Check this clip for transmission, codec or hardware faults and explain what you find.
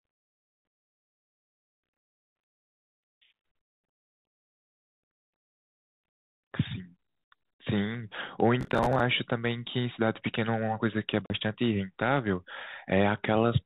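Two kinds of fault are audible: processor overload crackle twice, and one packet loss on an ADPCM call. The narrowband, 32 kbit/s G.726 ADPCM coding adds only light hiss.

Processor overload crackle runs from 0.84 to 2.6 s and again from 8.61 to 9.0 s. Buffers missed their deadlines in a row. Each miss replayed stale audio, giving gritty tearing consistent with roughly 10 ms buffers.

Packet loss on the ADPCM call occurs from 11.26 to 11.34 s. About 40 ms of audio drops to a hard-edged silence. The decoder then briefly mistracks, so the speech returns slightly distorted.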